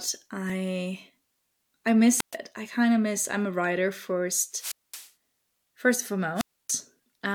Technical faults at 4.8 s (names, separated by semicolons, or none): wireless microphone squelch dropout